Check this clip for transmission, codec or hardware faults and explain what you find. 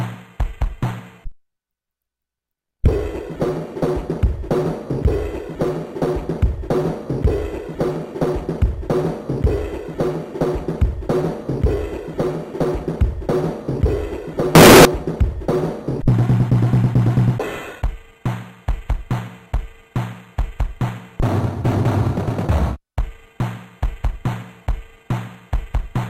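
One fault is present, a short burst of float read as integer between 14.55 and 14.85 s. For those 0.3 s the audio jumps to a very loud, harsh, near-square waveform sitting at an almost fixed, high level, with low-level background raised to the same level as the main sound. The likely cause is 32-bit floating-point samples being interpreted as 32-bit integers, so each sample's sign and exponent bits, not its true amplitude, determine the output value.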